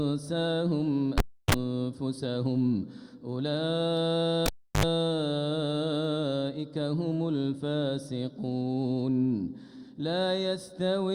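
At 1.18 s there is a pop, then about 318 ms of near silence, a 38 ms burst of 50 Hz mains buzz, and a second pop at 1.55 s as the sound comes back. The same thing happens at 4.46 s: a pop, about 333 ms of dropout, a longer 69 ms stretch of 50 Hz buzz, and a closing pop at 4.84 s. Both are a cable pulled and plugged in while the signal was live. The buzz is hum picked up while only the plug tip was making contact.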